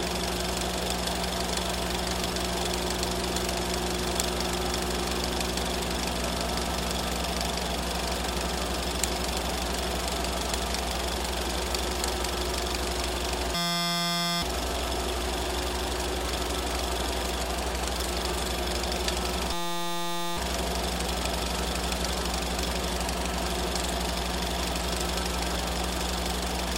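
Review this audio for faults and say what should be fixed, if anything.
A system hang loop occurs twice: 13.55 to 14.42 s and 19.53 to 20.37 s. Each time, one 5.8 ms slice repeats as a steady 172 Hz buzz, which fits a 256-sample buffer. Roughly a second of sound is lost each time. To prevent it, keep the audio thread from stalling, and have the driver mute output when the buffer stops being refilled.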